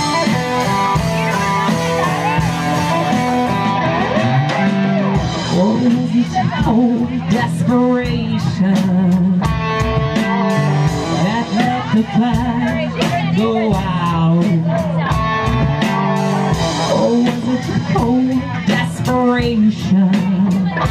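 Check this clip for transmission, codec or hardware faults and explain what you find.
No transmission, codec or hardware fault can be heard anywhere in the clip. Nothing in the audio points to a problem in how it was carried, encoded or captured.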